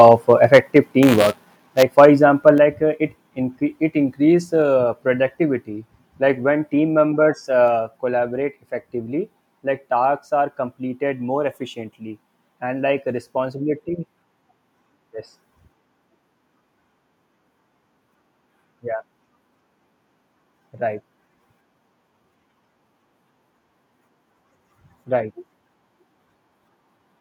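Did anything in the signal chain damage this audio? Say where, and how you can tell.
Yes. Microphone overload at the converter input: the peaks from 0.0 to 0.78 s, 1.98 to 2.06 s and 2.47 to 2.5 s carry a harsh, crackling edge with flattened tops, up to about 6 dB over full scale. The likely cause is microphone input gain set too high.

Microphone volume stepped down, in the call processing: the speech and background drop abruptly by about 2 to 5 dB at 0.57, 1.56, 2.58, 4.62 and 7.68 s, the last just after "team members". This is likely automatic gain control lowering the device level after finding the microphone too loud or clipping.

Buffer tearing at the driver or buffer stage: from 1.02 to 1.83 s a robotic 188 Hz buzz rides on the speech, which fits a 256-sample buffer. The writer and reader pointers overlap, so a small slice of each period replays audio from about 10 ms earlier.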